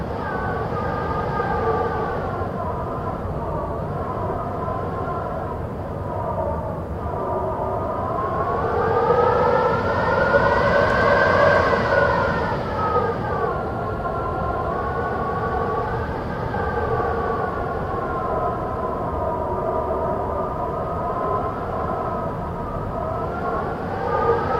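A drift correction step from 13.48 to 14.71 s drops the audio about 6% slower and 112 cents flat before snapping back, likely clock-matching software briefly slowing playback to refill its buffer.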